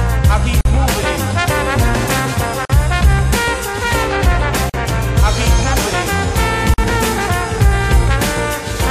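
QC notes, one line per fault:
0.61–0.65 s, 2.65–2.70 s, 4.70–4.74 s and 6.74–6.78 s: gap at a join of encoded pieces. The music drops out for about 43 ms every 2.0 s and then resumes where it left off. The pieces were encoded separately and butted together, so each join keeps one run's start-up delay and the previous run's last-frame padding as silence. The waveform shows flat-line notches with slightly softened edges, and the spectrogram shows narrow blank vertical stripes across all frequencies.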